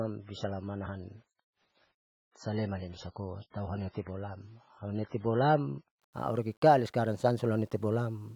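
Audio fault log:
Throughout: low bit depth without dither. Grainy distortion follows the speech and roughens quieter passages at about 40 dB below the signal, likely from rounding to 10 bits.
0.0–6.0 s: adaptive stream starting at a low bitrate. Nothing above 7.5 kHz and stronger codec artefacts, fitting a 16 kbit/s MP3, then quality jumps without a gap, consistent with 128 kbit/s.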